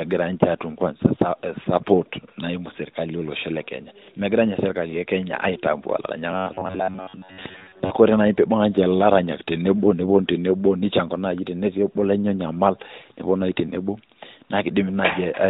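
From 6.32 to 7.90 s, robotic sound from repeated short buffers: a rigid metallic buzz at 93.8 Hz, likely from a roughly 10.7 ms chunk looping over most of the span, shown as evenly spaced horizontal harmonic stripes on a spectrogram.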